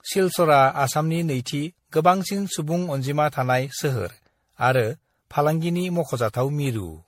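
Speech throughout, with generation loss: swirly, smeared and hollow, attacks blurred, nothing above 16.4 kHz. That fits a 64 kbit/s MP3, but it's worse than one pass would give, so it was likely re-encoded around ten times, stacking artefacts.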